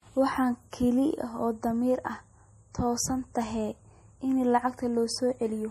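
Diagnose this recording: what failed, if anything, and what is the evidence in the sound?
The codec stage failed, most likely MP3 compression, and the damage is plainly audible across the whole speech clip. Nothing reaches above 15 kHz, and the treble stops at a hard ceiling, which fits a low bitrate near 40 kbps. Short of bits, the encoder cut the top band and dropped weak frequency lines that switch on and off between frames. That frame-to-frame instability separates it from a plain low-pass filter, which removes treble without the watery churn.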